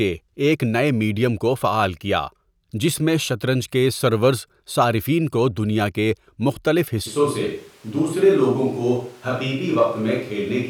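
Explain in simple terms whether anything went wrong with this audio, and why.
From 7.08 s, after "کو دنیا کے مختلف", the speech abruptly turns hollow and roomy with thinner bass to the end. This is likely a switch to a distant microphone; the change is instant, not a gradual drift away.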